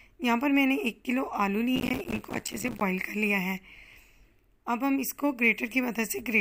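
From 1.76 to 2.81 s there's a burst of processor overload crackle. The machine keeps missing its deadlines for short buffers of around 5 ms, about 100 of them over that stretch, and each miss drops in a hard-edged gap of silence. Together they make a gritty tearing that stops once the load eases.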